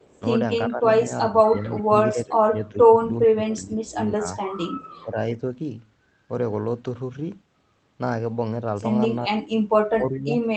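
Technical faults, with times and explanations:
0.68–4.23 s, 5.03–5.43 s and 9.89–10.42 s, speech suppressed in double talk: the voice ducks during overlapping talk, by roughly 20 dB for about two seconds of the first stretch, less in the second, and deepest at the end. This is likely the echo canceller clamping down on both talkers when it couldn't tell them apart.
4.82–5.03 s and 10.14–10.19 s, echo leak: a very faint copy of the voice, about 35 dB down, trails 384 ms behind. It's likely loudspeaker pickup that the far end's canceller let slip through.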